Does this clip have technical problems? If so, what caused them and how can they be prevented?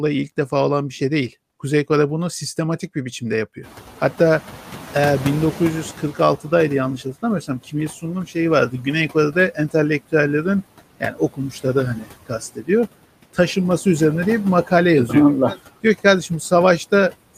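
Yes. Noise suppressor artifacts run through the whole clip: the suppressor pulls steady-noise bands down by about 15 dB frame by frame, so the noise sinks between phrases and rises under the speech. Preventing this means lowering ambient noise at the microphone so gentler suppression settings suffice.

Noise suppressor catching up, from 3.63 to 6.4 s: the room noise jumps by about 25 dB near 3.5 s, and the suppressor's estimate takes roughly 2.8 s to adapt, passing noise through before settling at about 10 dB of reduction. Preventing this means using a suppressor with faster noise tracking, or keeping sudden background sources away from the microphone.

Speech cut by the noise suppressor, at 11.0 to 11.75 s, 11.95 to 12.08 s and 12.27 to 12.69 s: brief stretches within each span are mistaken for noise and dropped by about 14 to 16 dB, so parts of the speech sound swallowed. Preventing this means reducing suppression aggressiveness or keeping the speech well above the noise floor.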